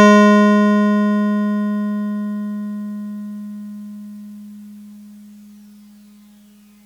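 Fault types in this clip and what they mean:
Nothing stood out on listening to this music clip.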